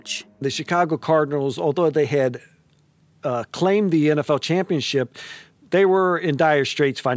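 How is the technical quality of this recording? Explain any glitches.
Nothing in this recording stood out as a technical problem on listening.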